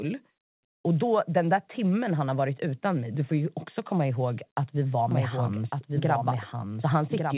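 Speech, heard over a narrowband call line with nothing above 4 kHz, which fits G.711 mu-law. From 5.11 s to the end, a doubled audio track appears. A second copy of the speech runs about a second behind the first, roughly 5 dB quieter. It cuts in abruptly, with no decay or room colour. The likely cause is a second, slower capture path or an edit that left two copies out of step.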